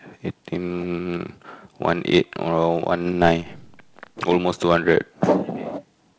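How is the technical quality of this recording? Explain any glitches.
The technical quality of this recording is good, with no glitches to explain.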